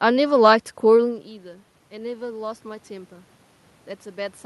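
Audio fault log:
1.43–3.18 s, automatic gain rising: after the level falls by about 17 dB as the talker moves back near 1.0 s, gain climbs about 3 dB over 1.75 s. Unlike the talker simply coming closer, the room noise swells along with the voice.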